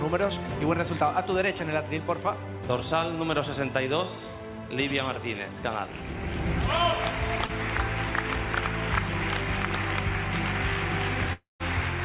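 Short concealed packet loss at 7.46 to 7.52 s: about 30 ms of audio arrived too late, and the receiver continued the preceding sound across the gap, heard as a brief smear or wobble. A long network dropout at 11.33 to 11.63 s, likely caused by a connection stall, leaves about 270 ms missing: the last sound is stretched into a fading buzz or hiss, then about 150 ms of silence before the audio resumes, with the lost part gone. All of this is heard through the call codec, which leaves nothing above 4 kHz.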